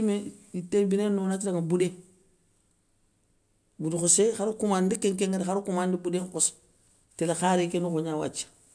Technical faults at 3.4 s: none

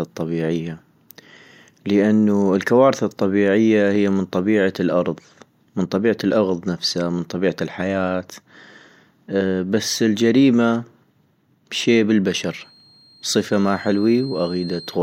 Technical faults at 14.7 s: feedback whistle

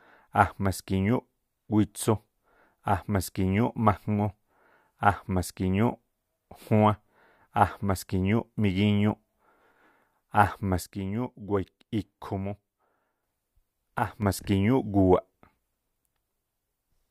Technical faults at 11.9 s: one channel drops out

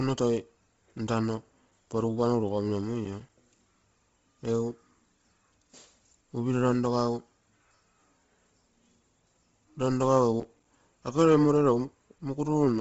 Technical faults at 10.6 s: Bluetooth LC3 compression; processor overload crackle

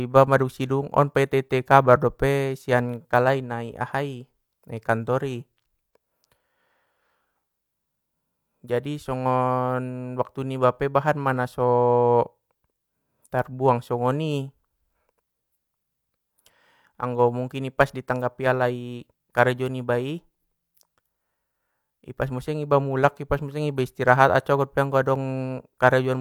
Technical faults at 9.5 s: none

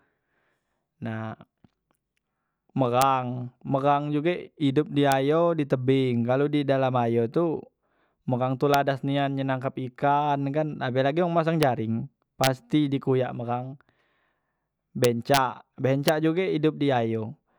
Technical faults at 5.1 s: integer overflow

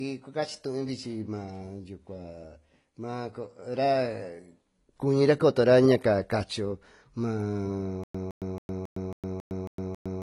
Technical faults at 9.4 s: AAC compression; stutter with silent gaps

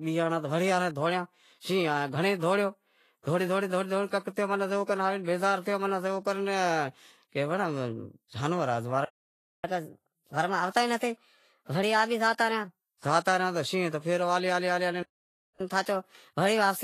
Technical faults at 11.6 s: Vorbis compression; catch-up at higher speed

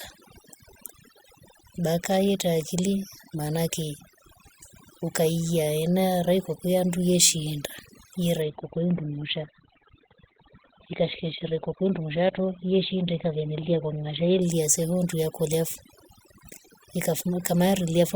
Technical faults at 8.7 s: overdone noise removal; adaptive stream at a lower bitrate

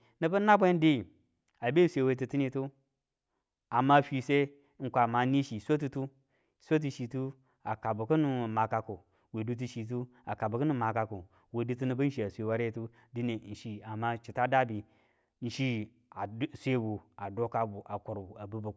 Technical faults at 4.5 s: none

